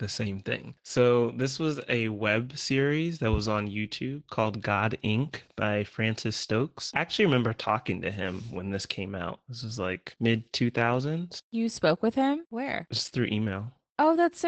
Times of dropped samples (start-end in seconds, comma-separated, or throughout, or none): 1.42